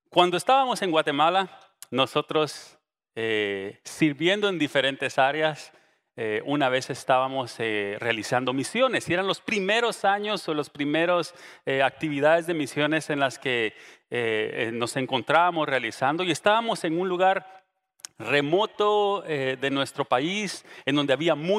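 Nothing in this one trips any alarm; there isn't a single technical fault to point to anywhere along the way.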